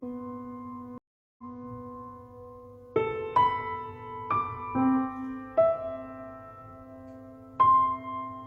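At 0.98 s the stream connection drops, and the player falls silent for about 0.40 s before reconnecting and starting a fresh decoder partway through the stream. This stream reconnect runs to 1.66 s. When the music comes back, it restarts about 0.28 s earlier than where it cut off, because the server resent a burst of audio, so a short stretch is heard twice. The first moment after the gap is muted or fades in rather than arriving at full level.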